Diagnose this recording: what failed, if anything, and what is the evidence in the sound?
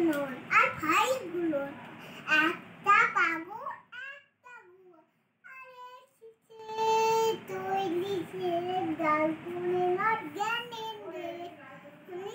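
Zipper noise at 3.07–4.18 s and 6.50–6.87 s: gain at the buffer stage moves in unsmoothed 2 dB, then 6 dB, steps, roughly ten per second, each stepping audibly.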